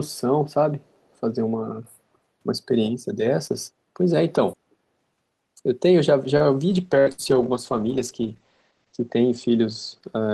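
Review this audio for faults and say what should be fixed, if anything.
At 0.94 to 0.98 s a very faint delayed copy of the speech, about 281 ms behind and roughly 40 dB down, appears as a weak smear on a spectrogram. This is likely an echo leak from the far end's loudspeaker. Better acoustic echo cancellation or headset use at that end would prevent it.

At 6.37 to 6.43 s a short stall from a late packet holds the sound about 27 ms too long, with nothing lost, so a repeated, flattened stretch shows in the waveform. A deeper or more adaptive jitter buffer would absorb the delay.

From 6.76 s to the end a call bitrate drop from 32 to 12 kbps cuts bandwidth from 20 kHz to 8 kHz, muffling the speech for about 2.3 s at its lowest. A spectrogram shows everything above 8 kHz empty. Steadier network capacity, or more conservative bandwidth estimation, would avoid the fall.

Two bursts of packet loss at 7.00 to 7.09 s and 7.12 to 7.35 s each remove about 60 ms of speech. 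In both, a fading concealment sound stands in for the missing audio, seen as decaying smooth energy. Forward error correction and a more reliable network path would reduce the losses.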